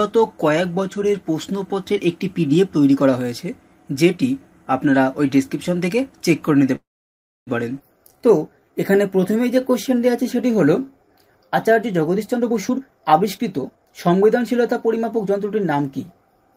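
At 6.75 s the sound stops moving forward. This is a call audio freeze. A brief buzzy continuation of the last sound fades out, then about 640 ms of silence follows. Normal playback resumes at 7.49 s, exactly where it left off. Nothing is lost. Instead, 714 ms of filler has been inserted. The likely cause is packets held up in transit, which left the jitter buffer empty. The receiver had nothing real to play.

Between 7.79 and 7.82 s comes a skip ahead. Playback jumps forward with almost no break. Only a tiny join of about 7 ms joins the two sides. Roughly 0.4 s of audio is gone. The cut lands right after the freeze, while later audio was already queued. So a stretch was dropped, taking back about 0.4 s of the delay the freeze had added.

From 7.98 to 11.98 s a jitter buffer slow-down sets in. The sound runs at about 90% speed. The pitch does not drop. Sustained parts stretch out, and a faint warble can creep in. 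The receiver is repeating single pitch periods and slivers of quiet, over and over. In total 421 ms is added. The buffer was low or had just raised its target delay, so it was rebuilding a reserve.

From 12.16 to 16.22 s the opposite happens: a jitter buffer speed-up. The sound runs at about 117% speed, still at the same pitch. It comes across as hurried. The buffer now held more than its target. So the receiver kept cutting out pieces one or a few pitch periods long. Roughly 0.7 s is removed across this stretch.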